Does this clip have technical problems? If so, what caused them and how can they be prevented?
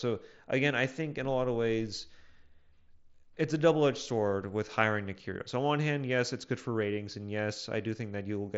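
No, this clip has no technical problems.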